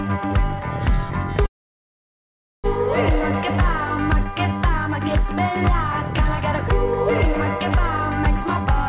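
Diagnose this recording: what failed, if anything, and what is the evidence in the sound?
A call audio freeze occurs from 1.46 to 2.66 s, likely from delayed network packets emptying the jitter buffer. The sound cuts to near-silence for about 1.15 s, then resumes with nothing lost.

A jitter buffer speed-up runs from 8.40 to 8.73 s. The buffer trims about a tenth of a second of excess delay, playing the band-limited, 4 kHz G.711 audio at 125% speed with unchanged pitch.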